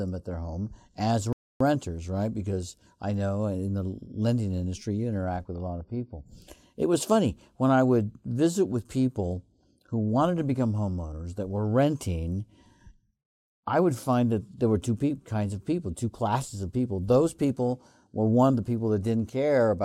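At 1.33 s, just after "at their home as", the speech cuts to silence for about 0.28 s, then resumes. This is a playback stall, likely from the player running short of data.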